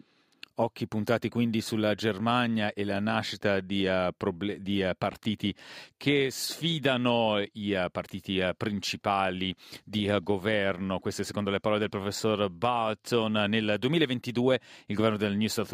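No technical faults can be heard anywhere in it.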